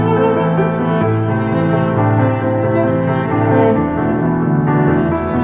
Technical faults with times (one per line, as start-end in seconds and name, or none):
none